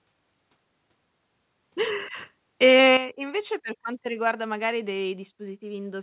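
From 2.63 to 2.96 s the loudest stretch of speech turns harsh and crackly, with a gritty edge riding on the syllables. That points to microphone overload, likely from an input volume set too high: peaks ran about 4 dB past the converter's limit, so roughly one sample in twenty had its top flattened. Unlike codec distortion, which smears evenly across the sound, this grit appears only on the loudest moments and vanishes as the level falls.

At 2.97 s, right after that distorted peak, the voice and the background both drop by about 8 dB in a single instant. That is the microphone volume stepped down, with call software likely reacting to the clipping by lowering the device gain. A fade or compressor would ease the level down gradually and recover. Here there is one abrupt step, and the level stays lower afterward. Throughout the clip nothing is heard above 4 kHz, consistent with a G.711 telephone codec on the call path.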